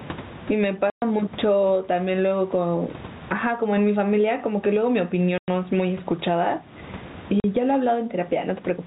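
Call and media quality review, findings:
Gain pumping throughout: loud and soft parts pulled closer in level, a swing of roughly 20 dB. Likely cause: input gain far too high, with a fast limiter or compressor clamping each peak. Waveform shows a squashed, flat envelope.

Packet loss filled with silence at 0.90–1.02 s (120 ms), 5.38–5.48 s (100 ms) and 7.40–7.44 s (40 ms). Gap lengths are multiples of 20 ms, which fits 20 ms packets, with the receiver inserting silence. Waveform shows dead-flat gaps with abrupt edges. Spectrogram shows blank vertical bands.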